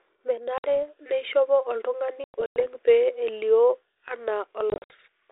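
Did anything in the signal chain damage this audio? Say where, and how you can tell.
Yes. Hard-edged silent holes appear at 0.58 s (about 60 ms, just before "neishopo oltung'ani"), from 2.24 to 2.66 s (about 200 ms scattered, before "pee elio"), and from 4.70 to 4.93 s. Each is followed by briefly rough sound. This is packet loss on an ADPCM call, a network-stage fault. The G.726 32 kbit/s decoder's predictor and step size drift out of step with the sender's until they resettle.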